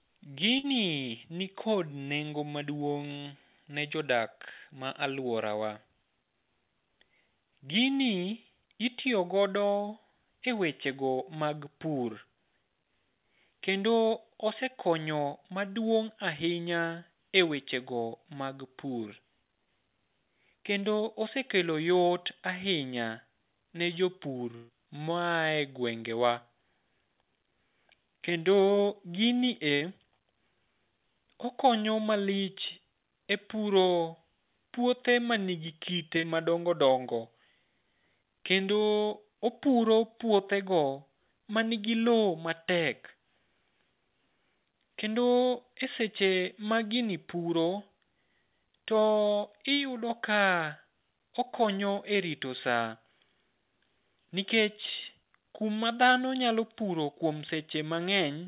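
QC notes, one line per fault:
0.58–0.65 s, 24.55–24.71 s, 29.75–29.83 s: burst of packet loss. Each gap is bridged by the last sound held and fading, for about 54, 134 and 60 ms. The longest follows "ne jopur". Audio then resumes further on with 60 to 140 ms missing, a jump rather than a brief smear.
28.93–28.97 s, 36.21–36.25 s: short concealed packet loss. About 20 ms went missing and was patched by continuing the previous sound before blending back. The result is a quick smear or wobble. The second sits between "puothe manigi kite" and "madongo dongo".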